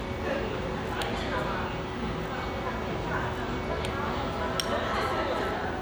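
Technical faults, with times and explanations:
No technical faults are audible; there are no breaks or added disturbances anywhere in the clip.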